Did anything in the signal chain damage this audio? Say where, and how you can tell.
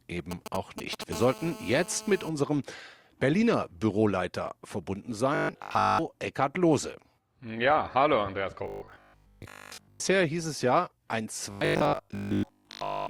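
Yes. From 0.31 to 1.04 s, GSM signalling bursts from a nearby 2G phone get rectified in the analogue wiring and heard as a galloping tick-and-buzz pattern, roughly 10 dB below the speech. A spectrogram shows clustered vertical stripes with a 217 Hz comb.

From 1.13 to 2.29 s, the same phone in a call produces steady GSM phone buzz at 217 Hz, about 16 dB under the speech. It is picked up in the analogue wiring and sounds hard and raspy. The spectrogram shows an unbroken harmonic comb unrelated to the voice.

Robotic sound from repeated short buffers is heard at 5.35 to 5.99 s, at 8.64 to 10.02 s (just before "hieß es ja ein") and at 11.51 to 13.09 s (right after "hieß es ja ein"). A rigid 50 Hz metallic buzz replaces much of the speech. The likely cause is a driver or buffer stage looping 20 ms blocks, which shows as identical repeating waveform cycles.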